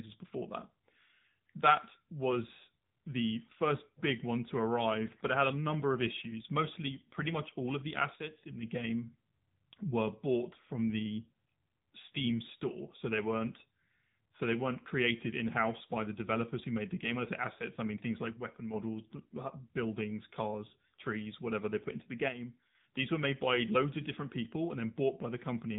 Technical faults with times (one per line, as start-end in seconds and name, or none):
0.00-25.79 AMR narrowband mobile codec